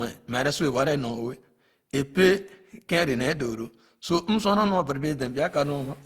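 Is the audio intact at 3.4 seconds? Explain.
No. Generation loss runs through the whole clip, including 3.4 s. Speech at this point sounds swirly, smeared and hollow, with blurred onsets. The likely cause is repeated Opus re-encoding, around seven passes at about 64 kbit/s, each adding noise and spectral holes.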